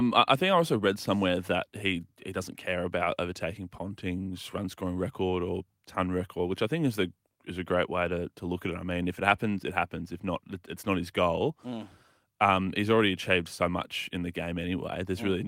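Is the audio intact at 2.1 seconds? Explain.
Yes, at 2.1 seconds the speech plays through cleanly, with no dropout, click, distortion or other fault audible at that moment.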